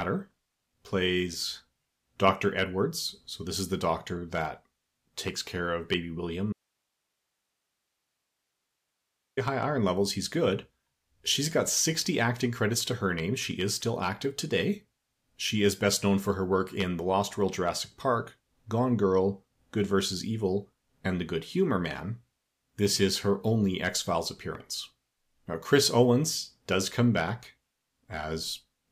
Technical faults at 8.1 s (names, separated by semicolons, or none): audio dropout to a faint residue